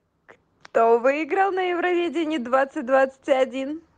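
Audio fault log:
1.11 s, microphone volume stepped down: speech and background fall about 4 dB together, likely software cutting input gain; waveform envelope steps down, spectrogram dims evenly.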